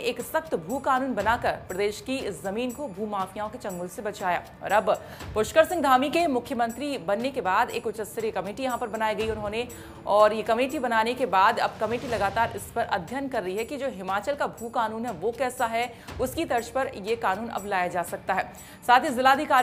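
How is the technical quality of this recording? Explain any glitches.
No technical glitches can be heard anywhere in the recording; the signal stays steady and intact throughout.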